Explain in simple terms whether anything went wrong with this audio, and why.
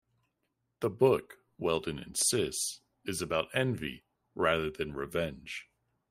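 Nothing went wrong with this audio: the speech comes through without any problem you can hear.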